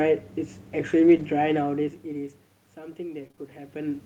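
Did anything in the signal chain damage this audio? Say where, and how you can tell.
Yes. Damage appears at the network stage, handled by the codec's recovery. From 0.99 to 1.25 s the sound turns rough and grainy, with no actual gap. This is a lost packet rebuilt from error correction. The lost audio was replaced with low-bitrate copies carried in the following packets. About 140 ms was rebuilt this way, which points to several separate packets lost. The copies hold less detail, so the sound coarsens briefly and then recovers.

In call processing, automatic gain rising starts at 2.96 s and runs to the end. The input level dropped by about 18 dB, and the gain control answered by turning itself up gradually. The tell is that the room noise swells along with the voice over that second, rather than the voice alone getting louder. The talker also shifts position around 3.5 s, but that is a natural level change at the microphone.

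Repeated packet loss, the robotic sound, hits the network path from 3.19 to 3.39 s. In that stretch the audio goes choppy. It sounds like three short holes, the longest about 21 ms. About 60 ms was filled by stretching the last sound, roughly 40 ms of it rebuilt, and about 60 ms is simply missing. Concealment covers about 30 percent of the span, so pieces drop out audibly.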